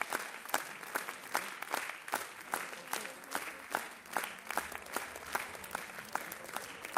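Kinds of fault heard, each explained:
No kinds of fault are heard in this audio, so there are none to explain.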